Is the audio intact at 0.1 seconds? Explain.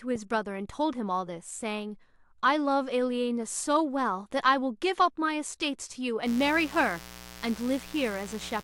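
Yes, the speech at 0.1 seconds is intact, with nothing wrong to be heard at that point.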